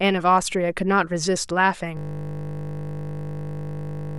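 A speech clip whose last part is a system hang loop: from 1.97 s to the end, a single 20 ms piece of audio repeats over a hundred times, producing a steady 50 Hz buzz. The waveform shows identical cycles, and the spectrogram shows flat, evenly spaced 50 Hz harmonics.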